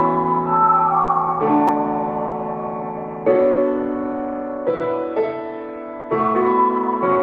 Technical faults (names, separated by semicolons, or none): clock drift between sender and receiver; short stall from a late packet; repeated buffer